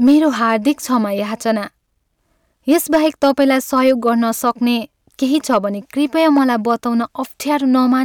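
Speech clip with hard clipping in five stretches: 0.06 to 0.96 s, 2.71 to 4.09 s, 4.47 to 4.50 s, 5.53 to 5.58 s and 6.17 to 6.71 s. The level is pushed past what the stage can handle, by about 3, 5, 1, 3 and 2 dB respectively, so the peaks get sheared flat. That adds gritty high harmonics, heard as crackle on loud moments. It's roughest in the 2.71 s stretch, where the overload is biggest.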